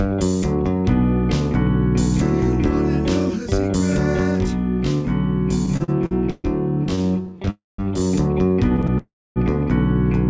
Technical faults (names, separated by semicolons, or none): channel delay (comb filtering); repeated stalls (stutter); call audio freeze